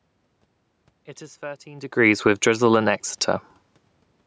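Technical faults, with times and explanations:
1.15–3.30 s, automatic gain rising: the gain control found the input too quiet and raised it about 4 dB. Voice and room noise swell together.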